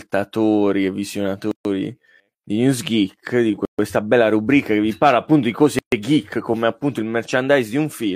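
At 1.51 to 1.65 s, 3.65 to 3.79 s and 5.79 to 5.92 s the speech drops out for about 136 ms each time. These are gaps at joins of encoded pieces. The audio was encoded in 2 s pieces and joined without trimming, so each join keeps the encoder's start-up delay and end padding. The second gap falls just before "bella rubrica che vi". The third sits between "vi parla appunto di" and "geek come appunto il". Each gap has smeared edges, and the speech then resumes where it stopped.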